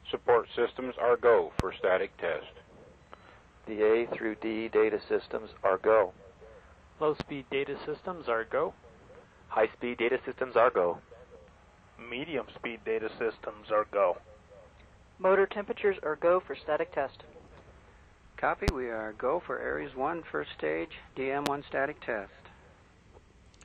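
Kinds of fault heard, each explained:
Loud pop: at 1.60, 7.20, 18.68 and 21.46 s, a single sharp pop of about 30 ms rises roughly 20 dB above the sound (somewhat less at 7.20 s), which continues underneath; likely a sudden voltage pulse entering the signal chain.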